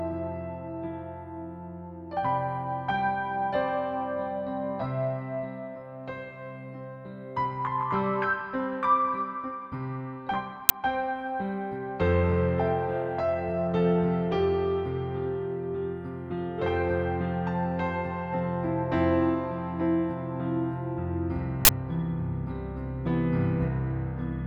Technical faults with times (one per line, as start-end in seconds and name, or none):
10.69 uninitialised buffer
21.65-21.69 uninitialised buffer